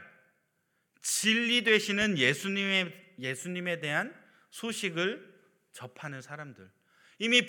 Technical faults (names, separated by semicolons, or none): loud pop